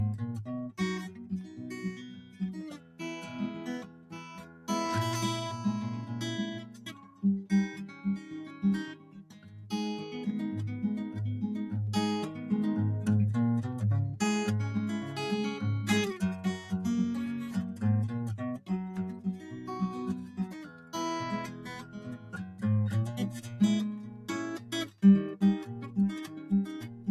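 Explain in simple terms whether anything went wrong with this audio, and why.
A noise suppressor made for speech was applied to this music throughout, treating held notes and ambience as noise, so the level pumps and the sound thins.

Sound cut by the noise suppressor is clearest from 0.7 to 4.68 s, 6.62 to 9.55 s, and 17.73 s to the end, where sustained parts and fading tails sink noticeably.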